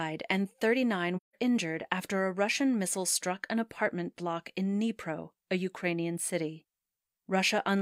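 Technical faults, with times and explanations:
1.16–1.35 s, AAC frame loss with muting: the speech fades out and back in around a gap of roughly 170 ms, just before "injured after a". The length fits about four lost AAC frames whose spectra the decoder set to zero. Because AAC builds its output from overlapping windows, the silence is not a hard cut. The surviving neighbouring frames taper the level down into the hole and back up out of it, leaving a soft-edged dropout.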